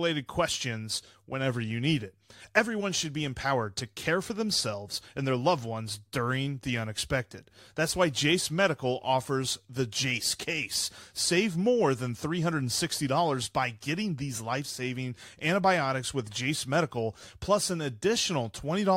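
No technical faults can be heard in the speech.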